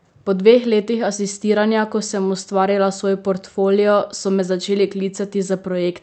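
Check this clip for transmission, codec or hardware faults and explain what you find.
No faults turn up in this clip.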